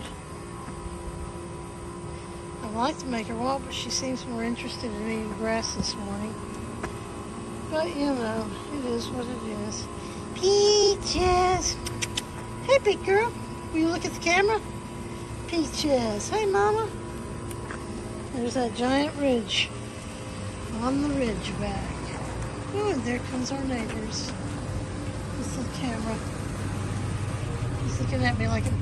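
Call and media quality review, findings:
Short garbled flutter, 10.83–10.88 s. Frames out of order: two adjacent 23.2 ms frames decoded swapped. Probable packet reordering ahead of the decoder. No time lost.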